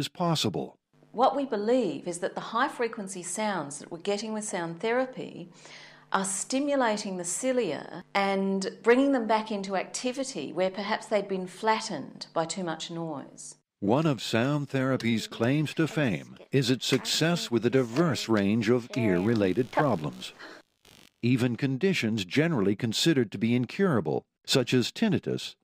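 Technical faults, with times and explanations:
19.16–21.50 s, computer activity noise: a buzzy, chirping layer comes in, pulsing at roughly 70 Hz and sitting about 30 dB under the sound. It tracks the machine's load rather than the audio, as processor or graphics activity shifts the shared ground the audio circuit rides on.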